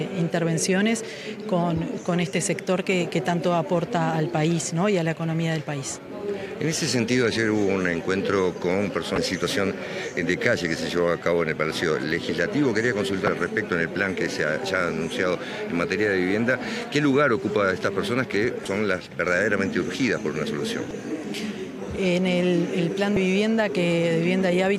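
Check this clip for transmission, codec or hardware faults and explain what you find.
Damaged data in a compressed stream occurs five times, at 9.15–9.18 s, 13.25–13.28 s, 18.63–18.66 s, 20.88–20.91 s and 23.14–23.17 s. Corrupted bytes make the decoder misread frames and lose sync until it finds the next valid header. Each event is a brief chirp or blip lasting about 30 ms.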